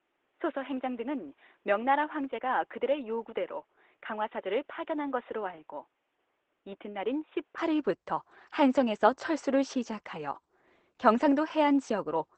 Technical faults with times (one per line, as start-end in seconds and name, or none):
0.00-12.37 Opus voice compression
0.00-7.58 input switched to a poorer device